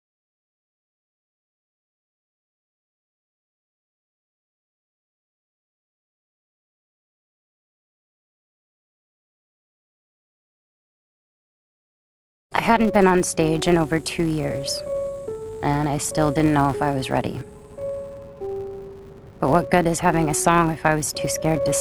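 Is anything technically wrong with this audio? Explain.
Yes. Throughout the clip, a steady 200 Hz buzz rides along with the sound, rising and falling with its level: the filter restarted on every block. Each block starts from silence, leaving a tick every 5 ms.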